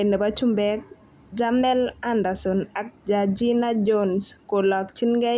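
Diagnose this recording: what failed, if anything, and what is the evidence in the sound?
Nothing in the signal chain gives itself away here: the speech arrives continuous and stable in level, with no breaks, jumps or added noise that would point to a failure at any stage.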